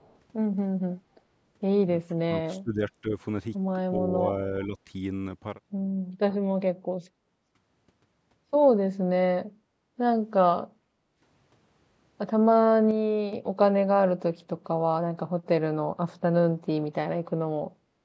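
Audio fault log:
0.00–0.15 s, echo leak: a faint delayed copy of the sound, roughly 40 dB down and 420 ms late, likely loudspeaker pickup the echo canceller left behind.
2.08–2.81 s, 3.02–3.13 s, 4.66–4.77 s, speech suppressed in double talk: the speech dips by roughly 25 dB, then about 10 dB twice, likely from the canceller ducking during overlap.
10.70–11.19 s and 17.71–17.82 s, background gated by the echo canceller: the room sound drops about 11 dB, then returns as the canceller releases its hold on the microphone.
12.91–13.33 s, sudden gain jump: speech and background noise fall together by about 6 dB without a ramp, likely an abrupt digital gain change.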